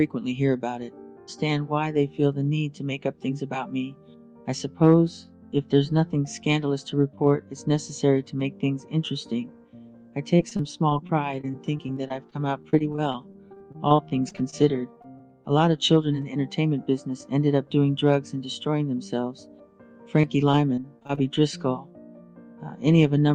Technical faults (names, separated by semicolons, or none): repeated packet loss (robotic sound); short concealed packet loss